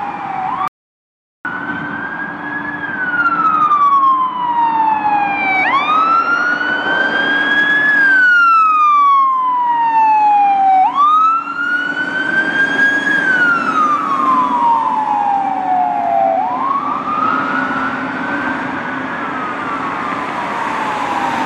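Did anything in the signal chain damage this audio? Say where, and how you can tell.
Yes: an audio dropout to silence from 0.68 s to 1.45 s. The sound cuts off abruptly, leaving about 0.77 s of silence with no room tone, then resumes mid-flow. The likely cause is a lost input upstream, such as a disconnected device or failed link, while the recorder kept writing silence.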